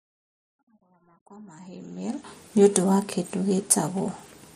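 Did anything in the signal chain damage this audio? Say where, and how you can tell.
Yes. A fine hiss and roughness sits on the speech throughout. It is strongest on loud, bright sounds and gone in pauses. That points to sample clock jitter at the converter. Sampling instants wander by a microsecond or two, leaving error about 30 dB below the signal.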